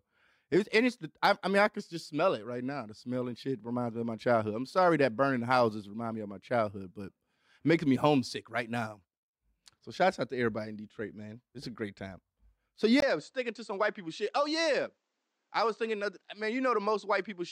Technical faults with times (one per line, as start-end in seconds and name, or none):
13.00-17.52 input switched to a poorer device